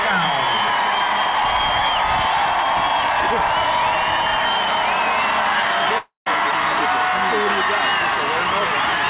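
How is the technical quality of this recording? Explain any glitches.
The recording has one clear glitch. It plays through a narrow call-style channel with nothing above 4 kHz, which fits a 64 kbps G.711 mu-law codec.

From 5.98 to 6.28 s, the last sound smears into a fading buzz, drops to about 0.14 s of silence, then resumes with roughly 0.28 s missing. This is likely a long network dropout: the receiver stretched the final audio to cover packets that never arrived.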